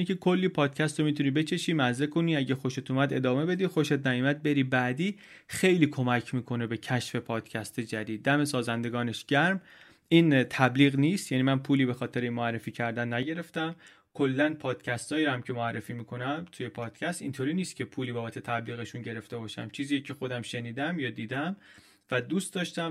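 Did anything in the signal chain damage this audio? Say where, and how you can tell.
Yes. Channel delay (comb filtering) runs from 13.23 s to the end at 22.91 s, where the speech turns hollow and phasey. One channel lags roughly 10 ms, a short buffer offset, so the mono sum cancels at evenly spaced notches from about 50 Hz.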